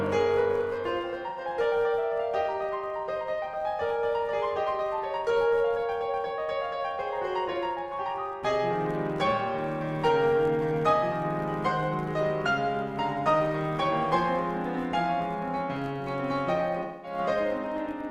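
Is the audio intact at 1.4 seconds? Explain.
No, not quite. From 1.29 to 1.40 s there's an AAC frame loss with concealment: about 85 ms of data went missing, which fits two dropped frames, and the decoder patched the gap from the last good spectrum, so the music turns smeared and a bit noisy right up to that point. On top of that, the filter is restarted on every block for the whole clip, including this moment. It starts each block from silence, which leaves a small click at every block boundary. Together they make a steady buzz at about 93.8 Hz that rises and falls with the music's level, which fits a 512-sample buffer.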